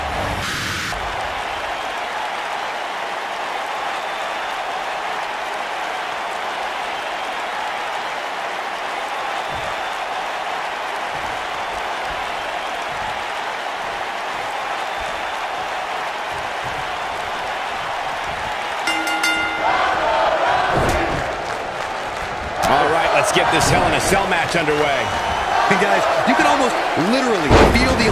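Audio read two samples at a time (double speed), from 0.42 to 0.92 s: sample pairs taken as single frames, so the sound runs twice as fast, an octave higher.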